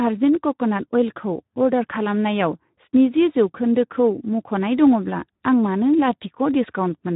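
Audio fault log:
Throughout: Speex codec damage on the speech, hoarse and noisy from a starved CELP excitation near 11 kbps, with nothing above roughly 3.8 kHz.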